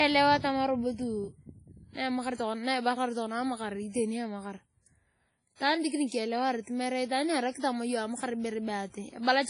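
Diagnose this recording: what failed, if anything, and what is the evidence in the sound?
The codec stage is at fault throughout. The speech sounds washy and ringing, with hiss that swells and fades with the voice, and there is nothing above 10.1 kHz. This is likely WMA compression at a low bitrate, perhaps 24 kbps. Unlike steady line noise, this hiss follows the signal.

Pre-echo, also from the codec, shows at 5.56–5.60 s and 6.08–6.12 s. A brief hiss of about 44 ms and then 37 ms leads sharp onsets, blurring them. Quantisation noise spread across a transform block fills the quiet before each attack. Dropout or click faults have no hiss ahead of the onset.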